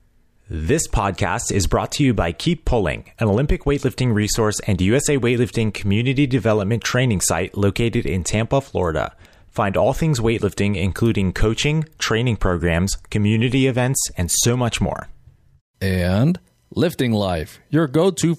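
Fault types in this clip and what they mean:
No faults can be heard anywhere in this recording.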